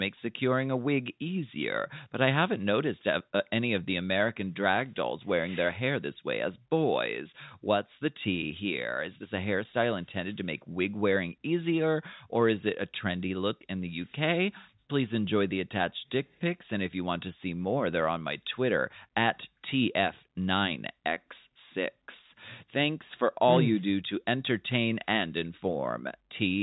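No technical faults can be heard in this speech recording. It carries the narrow, telephone-like sound of G.711 mu-law coding, with nothing above about 4 kHz and the lowest bass trimmed by the call's microphone processing.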